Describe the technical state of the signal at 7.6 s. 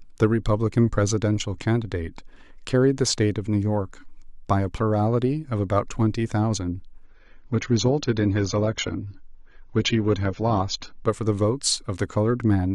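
At 7.6 s you're inside a stretch where the adaptive stream has dropped to a lower bitrate, running from 7.04 to 11.04 s. The speech switches abruptly, with no gap, to a dull, more artefact-laden sound with nothing above 7.1 kHz, which fits a very low-bitrate AAC rendition.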